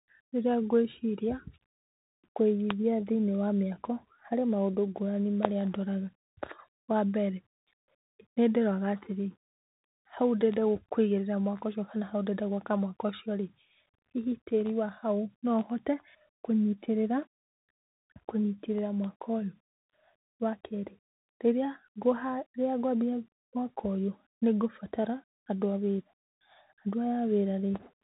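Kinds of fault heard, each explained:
Bluetooth CVSD headset codec: The speech runs through the narrowband codec used by Bluetooth headsets. It sends one bit per sample, telling the decoder to step up or down, with a step size that adapts. Everything above about 3.8 kHz is gone, so the speech sounds thin and boxed in. Fast, loud high sounds outrun the step and break up. S sounds turn scratchy. A grainy hiss sits under the speech for the whole clip, in keeping with a 64 kbps stream.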